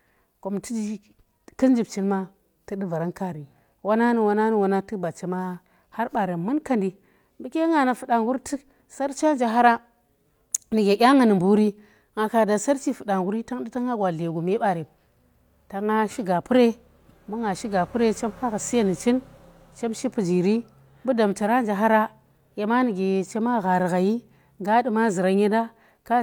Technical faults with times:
none

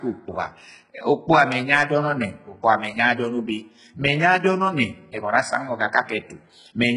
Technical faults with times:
0.00-6.96 HE-AAC compression

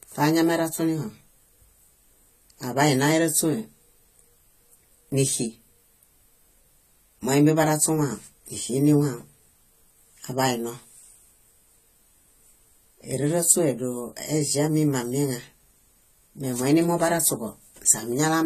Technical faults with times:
0.00-18.45 AAC compression

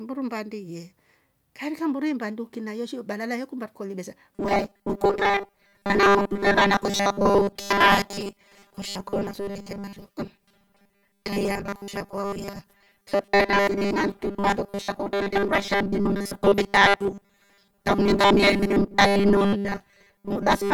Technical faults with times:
4.35-20.74 robotic sound from repeated short buffers

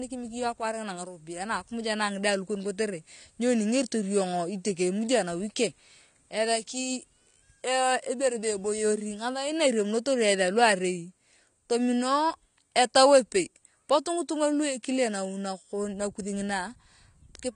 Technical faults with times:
0.00-17.55 AAC compression

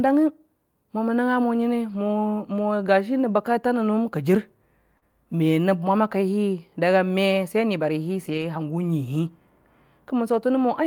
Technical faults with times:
1.89-1.95 lost packet rebuilt from error correction
4.97-5.03 short concealed packet loss
8.25-8.43 lost packet rebuilt from error correction

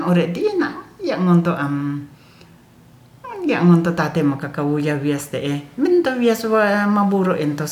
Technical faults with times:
none

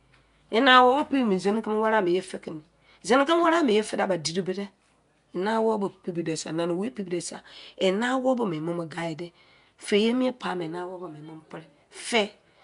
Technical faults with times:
0.00-12.64 Nellymoser compression
0.67-1.54 drift correction step
6.14-6.87 drift correction step

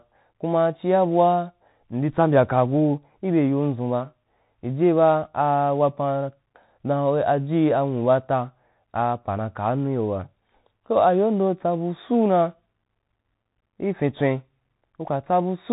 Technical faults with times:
0.00-15.72 Bluetooth CVSD headset codec

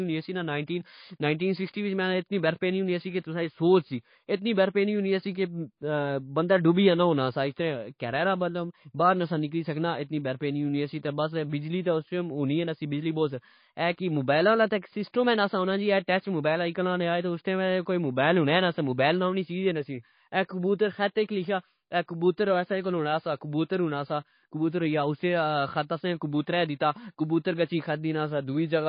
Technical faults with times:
0.00-28.89 MP3 compression

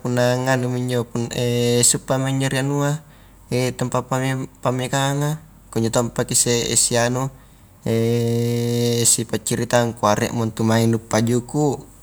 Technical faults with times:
none

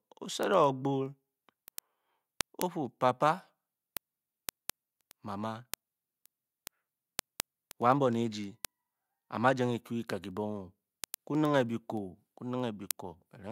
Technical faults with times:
0.12-13.43 word clock ticks

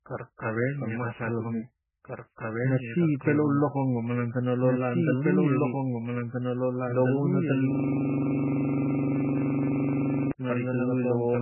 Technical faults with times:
0.00-11.41 doubled audio track
0.00-11.41 MP3 compression
7.71-10.32 system hang loop

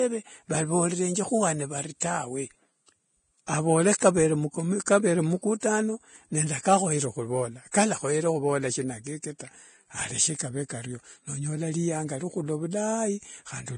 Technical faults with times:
0.00-13.77 Vorbis compression
2.00-2.02 pre-echo
4.86 pre-echo
5.60-5.63 pre-echo
7.71-7.74 pre-echo

